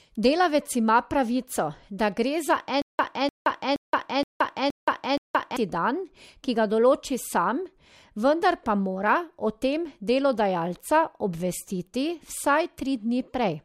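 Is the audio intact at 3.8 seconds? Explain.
No. From 2.82 to 5.57 s there is a stutter with silent gaps: a 299 ms speech fragment repeats six times, every 471 ms, separated by 173 ms of digital silence, likely a stalled stream replaying its last buffer. Spectrograms show identical blocks between empty columns.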